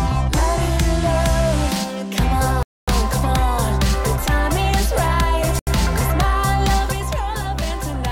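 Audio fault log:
2.63–2.88 s and 5.59–5.67 s, Bluetooth stall: the sound drops to complete silence for 250 ms and then about 80 ms before resuming. This is likely interference delaying packets until the headphones' buffer emptied, so playback halted until retransmitted data arrived.
6.92 s to end, sudden gain jump: the level falls by about 5 dB in a single step and stays there. Background noise drops along with the sound, pointing to a digital gain change likely applied instantly without any ramp.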